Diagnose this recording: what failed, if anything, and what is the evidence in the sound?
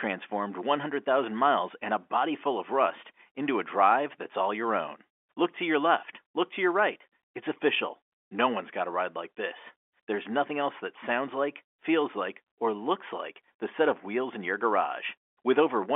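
Nothing in the recording has failed at any stage. The speech comes over a normal G.711 telephone coding path, with the sound confined to the telephone band of roughly 300 Hz to 3.4 kHz and any coding noise at most faint.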